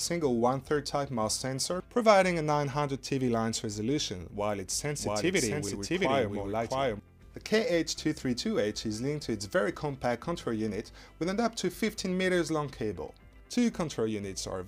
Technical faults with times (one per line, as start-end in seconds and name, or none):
4.99-6.99 doubled audio track